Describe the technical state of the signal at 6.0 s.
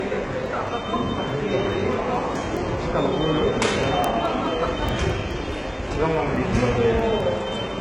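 At 6.0 s the treble sounds heavily processed: gritty, metallic highs with nothing above 11 kHz. This is likely HE-AAC compression at a very low bitrate, near 12 kbps, rebuilding the treble from copied lower bands. On a spectrogram, the treble above the crossover looks smeared and blocky and stops flat at 11 kHz.

Word clock ticks also fall here, part of a run from 0.25 to 7.63 s. They are sharp clicks of uneven strength, repeating steadily about every 0.2 s, roughly forty in all. An unlocked receiving clock, drifting around 100 ppm, drops or repeats one sample at each slip. The waveform shows single-sample jumps, and the spectrogram shows thin vertical lines at even spacing.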